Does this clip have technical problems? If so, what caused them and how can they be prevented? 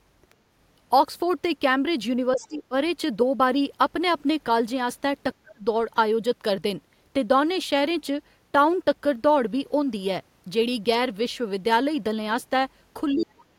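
Yes. Other side's voice leaking through appears twice: a very faint scrap at 0.30 to 0.34 s, roughly 40 dB under the speech, and a much stronger burst at 13.19 to 13.26 s, only about 15 dB down. The likely cause is the far end's loudspeaker playback reaching the microphone, with the echo canceller leaving a residue. A second, unrelated voice bleeding in briefly, rather than a smeared copy of the talker, separates this from room reverberation. Using a headset or improving acoustic echo cancellation would prevent it.

Speech suppressed in double talk occurs at 2.34 to 2.74 s, 5.43 to 5.65 s, and from 13.13 s to the end, with the talker's level dropping by roughly 25, 30 and 40 dB. This likely happens because the echo canceller, facing both sides talking at once, attenuates everything. A packet-loss dropout cuts abruptly to silence or glitches, whereas here the voice ducks deeply for a few hundred milliseconds while the other side is active. 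A canceller with better double-talk detection, or a headset, would prevent it.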